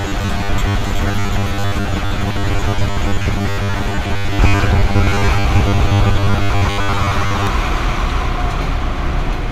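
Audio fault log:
0.01–7.47 s, robotic sound from repeated short buffers: a rigid metallic buzz at 100 Hz that loosely follows the sound. Audio likely arrives too seldom, so most of the time is filled by looping a 10 ms slice, whose repeat rate sets the buzz.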